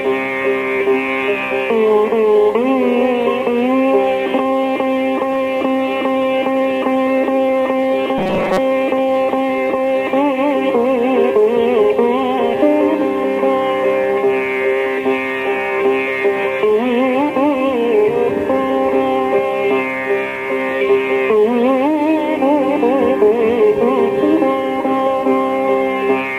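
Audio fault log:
8.18–8.59 s, robotic sound from repeated short buffers: new audio likely arrived too seldom here, so the playback software kept filling the gap by repeating its last short buffer, about 5.3 ms long, while most of the real audio in this stretch was skipped. Repeating at that fixed interval stamps a rigid, metallic buzz at 188 Hz onto the sound, and the original comes through only roughly beneath it.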